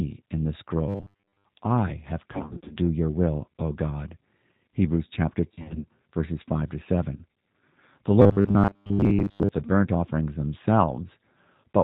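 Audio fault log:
Throughout: G.729 codec, plainly audible. The speech is rebuilt at 8 kbit/s from a vocal tract filter, a pitch predictor and sparse pulses, so nothing above 4 kHz survives and every syllable carries a rough, slightly synthetic grain. Unlike the dropouts below, this colouring never lets up.
0.88 to 1.45 s and 8.22 to 9.49 s: robotic sound from repeated short buffers, between "in the" and "I have", then ending just before "the burnt offerings". A rigid metallic buzz at 100 Hz sits on the speech, which fits repeated 10 ms chunks, likely from late buffer delivery. Roughly two thirds of the audio is repeats, so the words are only loosely followed.
2.34 to 2.76 s and 5.52 to 5.86 s: VoIP packet loss concealed by the speech codec, the first between "I have" and "your will". Scattered losses of 220 ms over 360 ms, then 170 ms over 320 ms, with runs up to 40 ms, make the decoder stretch its last pitch into buzzy, fading fragments. 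The speech recovers only gradually, unlike the fixed 100 Hz robotic buzz.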